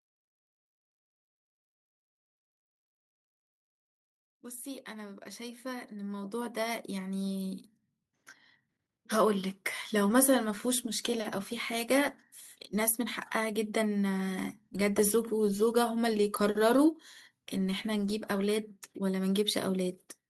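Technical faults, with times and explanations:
4.63 to 7.66 s, automatic gain rising: the gain control judged the incoming level too low and lifted its gain step by step, about 14 dB over three seconds, so the speech and the background noise beneath it swell upward together rather than holding steady.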